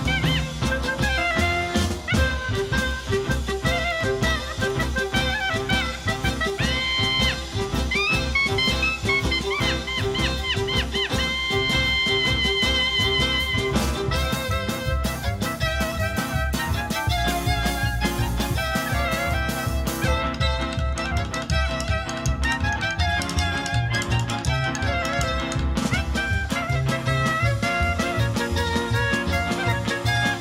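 From about 3.91 to 6.20 s there are periodic USB or driver dropouts: roughly twenty tiny silent gaps, every 0.1 s, ticking steadily through the sound.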